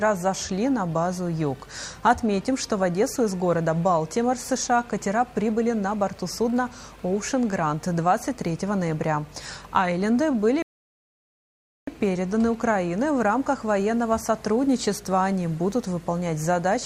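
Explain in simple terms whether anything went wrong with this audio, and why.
At 10.62 seconds there is a rebuffering stall: the player used up all the audio it had downloaded and had to wait for more. The sound drops to silence until 11.88 seconds, then picks up exactly where it stopped, so nothing is missing, but about 1.25 seconds of dead air is added.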